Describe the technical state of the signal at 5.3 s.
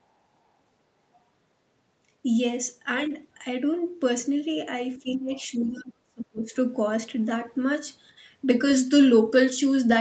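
Speech suppressed in double talk covers 5.3 s, within a span running from 4.98 to 6.53 s. With both ends talking at once, the echo canceller likely could not tell the near talker apart from the loudspeaker echo, so it pulled the whole microphone signal down. The speech sinks sharply, by something like 35 dB at its deepest, and comes through dulled and broken up for about a second and a half.

The other side's voice leaking through also begins right at this point, from 5.31 to 5.43 s. The echo canceller likely left part of the far end's loudspeaker playback in the microphone signal. That residual is a brief scrap of a second voice, around 30 dB below the speech. It is faint, and it sits inside the stretch where the main talker is already being suppressed.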